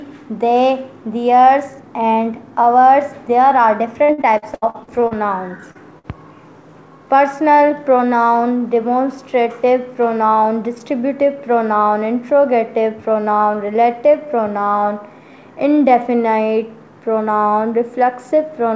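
Repeated packet loss between 4.04 and 5.14 s gives a choppy, robotic stretch: nine gaps, the longest 78 ms, are patched by extending the previous sound, so about a third of that span is synthetic and fragments go missing. A jitter buffer slow-down from 4.81 to 5.61 s overlaps it, repeating pitch periods to rebuild a reserve, adding 74 ms and running the audio at 92% speed, drawn out at unchanged pitch. Short concealed packet loss at 5.71 to 5.78 s drops 40 ms, which the receiver bridges by continuing the last sound, heard as a brief smear or wobble. A burst of packet loss at 5.99 to 6.07 s removes another 40 ms, filled with a fading continuation that turns into a held buzz or hiss before the audio resumes further on. Throughout, the call path leaves nothing above 8 kHz, which fits G.722 wideband coding.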